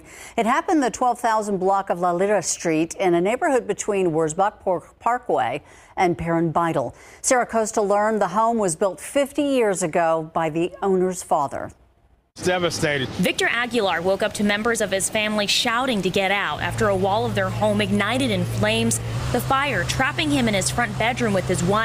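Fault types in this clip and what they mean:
Listening through, I hear no technical fault anywhere in the clip. There is nothing here to list.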